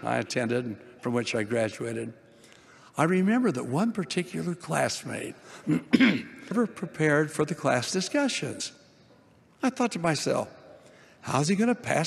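Jumps at 6.50 s and 8.59 s, where the audio lurches forward about half a second and then roughly 150 ms, are compressed frames skipped: whole frames of about 23 ms went unplayed.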